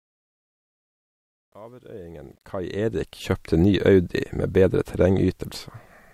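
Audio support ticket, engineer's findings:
Truncation distortion on the fade-in, 0–3.40 s, worst 0–2.18 s: gritty, stair-stepped waveform, broadband hash on spectrogram. Undithered gain stage, consistent with 11-bit word length.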